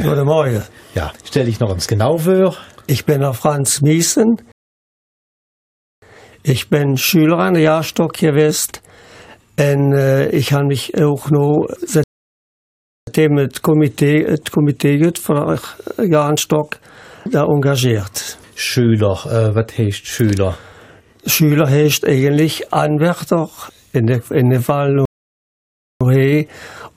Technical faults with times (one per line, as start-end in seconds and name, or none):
4.52-6.02 rebuffering stall
12.04-13.07 rebuffering stall
25.05-26.01 rebuffering stall